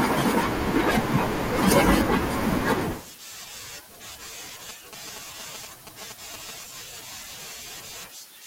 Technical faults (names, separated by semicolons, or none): GSM signalling bursts